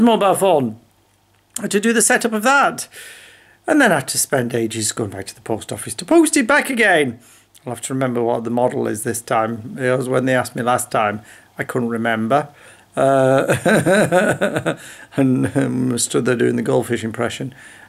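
No faults can be heard anywhere in the clip.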